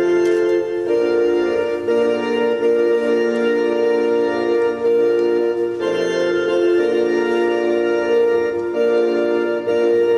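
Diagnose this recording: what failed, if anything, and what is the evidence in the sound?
The converter stage failed, with sample clock jitter throughout. A fine hiss and roughness ride on loud, bright passages and vanish in silence. The clock wobbles by a couple of microseconds, mistiming samples. Steep waveform slopes turn this into noise roughly 45 dB down.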